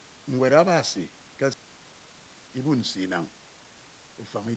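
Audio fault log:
1.53–1.55 s, skip ahead: playback jumps straight over roughly 0.7 s of speech with no gap filled in, so the two sides butt together abruptly.
1.63–2.80 s and 3.42–4.55 s, jitter buffer speed-up: the buffer was trimming excess delay by cutting tiny pitch-period slices, so speech runs about 14% then 9% faster at unchanged pitch and sounds hurried.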